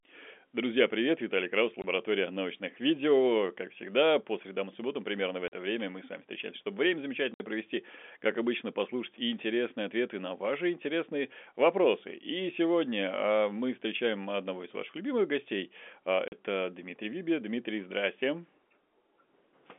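At 1.82 to 1.84 s, 5.48 to 5.52 s, 7.34 to 7.40 s and 16.28 to 16.32 s, the speech drops out in hard-edged gaps of 20, 40, 60 and 40 ms. This is packet loss filled with silence: lost packets, consistent with 20 ms framing, were replaced by nothing over the band-limited G.711 telephone line.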